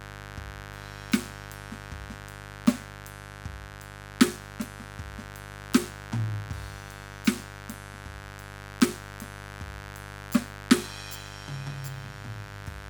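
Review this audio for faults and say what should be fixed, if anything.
Mains buzz throughout: sharp 50 Hz switching spikes leak in twice per cycle, spraying harmonics into the kilohertz range as a raspy buzz roughly 10 dB below the music. Prevent it with shielded balanced cabling, proper grounding, and keeping dimmers and rectifier supplies off the audio circuit.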